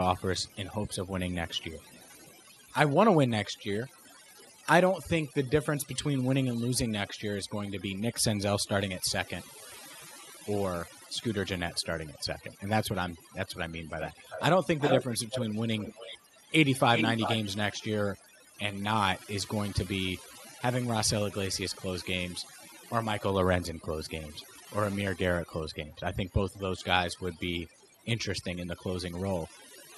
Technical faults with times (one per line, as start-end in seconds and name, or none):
0.00-29.97 overdone noise removal
0.18-2.39 echo leak
4.06-4.48 echo leak
14.00-16.18 echo leak
16.95-17.37 echo leak
24.04-24.09 echo leak